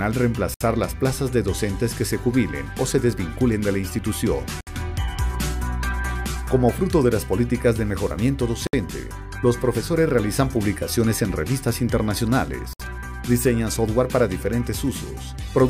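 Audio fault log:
0.54–0.61, 4.61–4.67, 8.67–8.73 and 12.73–12.80 s, gap at a join of encoded pieces: separately encoded pieces were joined every 4.0 s with their start-up delay and final-frame padding left in, so roughly 64 ms of silence interrupts the sound before it resumes where it stopped. The waveform shows flat stretches, and the spectrogram shows narrow blank vertical strips with slightly smeared edges.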